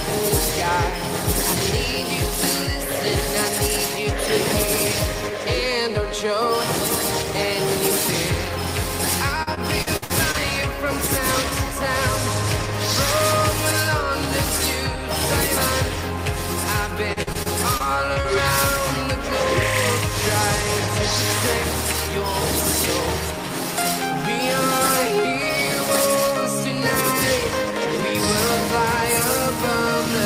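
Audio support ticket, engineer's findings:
Repeated packet loss (robotic sound), 9.43–10.36 s: choppy stretch. Several short dropouts, longest about 56 ms, each patched by extending the preceding sound; roughly a quarter of the span is synthetic fill. Probable component: network jitter buffer and concealment.

Same fault, 17.13–18.26 s: choppy, gaps up to about 42 ms, roughly a sixth of the span concealed. Same path; the losses recur in bursts rather than as isolated drops.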